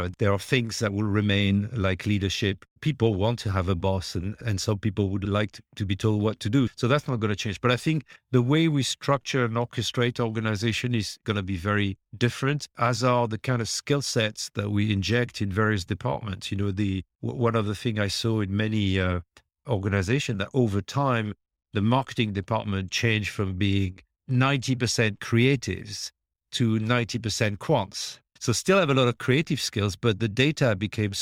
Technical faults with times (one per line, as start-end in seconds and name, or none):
none